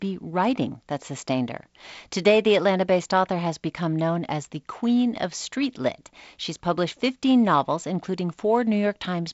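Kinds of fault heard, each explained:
Nothing here counts as a fault: the speech is carried by G.722 wideband telephone coding, with the content stopping around 7.7 kHz and the light coding texture you'd expect from that path.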